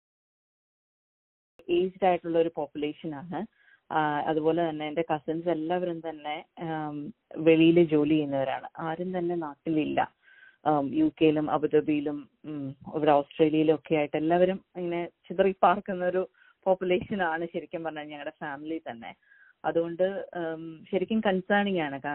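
The capture began late, a cut-off start: the first 1.59 s is digital silence, and at 1.59 s the audio appears abruptly mid-sound. Because recording started partway through, there is no natural attack or fade-in, just an instant jump from nothing to full level.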